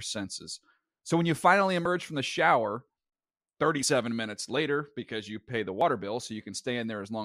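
Speech with audio missing between chunks: brief skips at 1.85, 3.83 and 5.81 s, each dropping about 20 ms and splicing the edges together without silence. The regular spacing of roughly 2 s likely comes from a processor losing samples at each 2.0 s chunk boundary.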